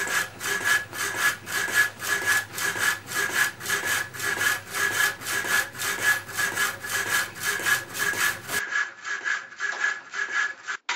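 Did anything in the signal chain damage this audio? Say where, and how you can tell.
Yes. From 8.59 s to the end the sound turns duller and about 5 dB quieter, with no gap. A spectrogram shows nothing above 7.6 kHz and a new noise floor roughly 45 dB down. This is likely an input switched to a poorer device at the driver stage.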